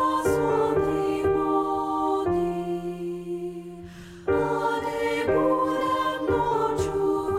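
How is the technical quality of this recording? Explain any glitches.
No glitches turn up anywhere in the recording. Nothing in it calls for a technical explanation.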